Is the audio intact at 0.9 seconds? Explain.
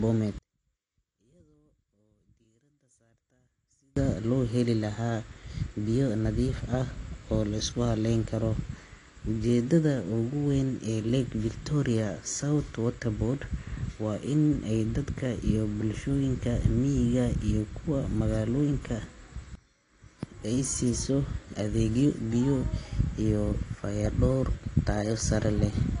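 No, it isn't. From 0.38 to 3.97 s the speech nearly disappears, dropping about 39 dB, most likely because one channel is inverted. With one side's polarity flipped, the shared centre content cancels in the mono sum, leaving only a faint residue of the channel difference. The whole clip, 0.9 s included, is also dull and swirly with nothing above 10 kHz, plainly audible damage that most likely comes from AAC compression at a low bitrate, around 32 kbps. The encoder has dropped the top end and coarsely quantised what's left.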